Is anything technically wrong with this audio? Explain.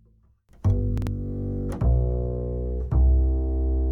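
Yes. From 0.98 to 1.07 s there are chunks out of order. One 46 ms block arrived a chunk late and plays after the block that should follow it. Nothing is lost, but three hard joins break the sequence into a brief jumbled moment.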